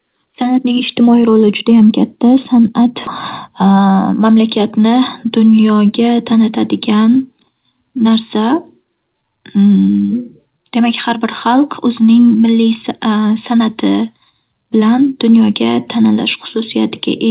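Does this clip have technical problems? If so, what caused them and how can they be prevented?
Yes. A skip ahead at 3.07 s drops roughly half a second of speech, and the jump closes with no gap when queued audio is lost in transit or thrown away by an overflowing jitter buffer. Larger jitter-buffer headroom and steadier network delivery would prevent this.

A jitter buffer speed-up from 3.62 to 4.28 s plays the speech at 107% speed, with the same pitch, as the buffer trims a few tens of milliseconds of pitch periods to reduce its backlog. Reducing packet bunching through better network pacing or QoS would keep the buffer near its target and avoid this catch-up.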